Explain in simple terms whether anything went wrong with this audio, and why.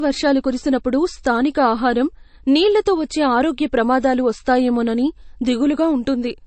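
The speech sounds dull and plainly watery from start to finish, with nothing above 8.3 kHz, likely from MP3 compression discarding treble and fine detail.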